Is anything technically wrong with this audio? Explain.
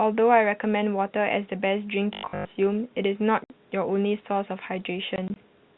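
Yes. From 2.13 to 2.45 s the speech turns into a rigid, metallic buzz at 50 Hz, the robotic sound from repeated short buffers. This is likely the player recycling the last 20 ms because new audio arrived too slowly, so most of that stretch is repetition rather than real speech. Unlike a tonal hum, the buzz still roughly follows the speech.

Packet loss filled with silence cuts the speech twice. At 3.44–3.50 s there is a single 60 ms hole, which fits three 20 ms packets. Between 5.16 and 5.36 s, another 60 ms of silence is scattered in gaps of no more than 20 ms. Both show hard edges and true silence, not a repeated buzz, which sets them apart from the robotic fault. The G.711 telephone coding passes nothing above 4 kHz throughout.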